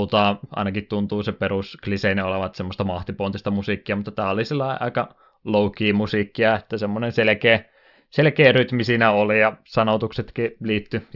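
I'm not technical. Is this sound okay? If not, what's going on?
Yes, nothing in this recording points to a technical problem with how the sound was captured, processed or delivered.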